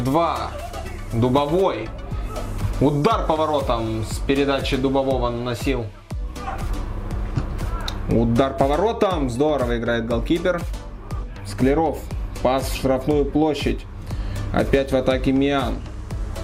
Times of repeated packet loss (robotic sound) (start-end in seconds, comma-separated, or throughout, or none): none